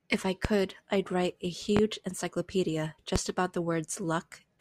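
At 0.45–0.49 s, 1.77–1.80 s and 3.16–3.20 s, a loud pop sits roughly 20 dB above the speech, which continues underneath. Each is a single sharp thump, likely from a voltage transient such as a switch, static or driver glitch.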